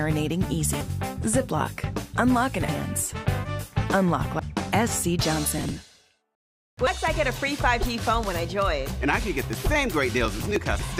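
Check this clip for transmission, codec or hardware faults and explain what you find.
Two faults recur through the clip: damaged compressed-stream data and processor overload crackle.

Damaged data in a compressed stream: brief chirps or blips at 0.81, 2.69, 4.39 and 6.87 s, and a slightly longer one from 10.79 to 10.88 s. Corrupted bytes make the decoder misread frames, lose sync and hunt for the next valid frame header.

Processor overload crackle: gritty tearing from 5.58 to 6.01 s and again from 10.26 to 10.56 s. The processor missed many audio deadlines in a row, dozens in the first burst and about ten in the second. Each missed buffer was skipped, leaving a tiny hard-edged gap, which points to buffers of a few milliseconds.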